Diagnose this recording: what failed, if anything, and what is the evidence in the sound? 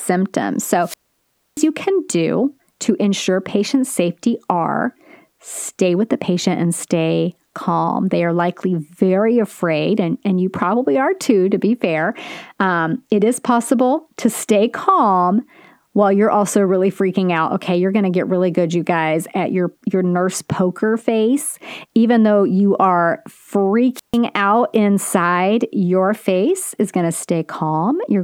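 Wireless microphone squelch dropout in the analogue radio link. From 0.81 to 1.67 s, hiss rises and the speech mutes for 0.64 s before "can do to ensure". From 23.94 to 24.18 s, a 0.14 s mute precedes "out inside your face". The FM signal fades, and the receiver's squelch cuts the output.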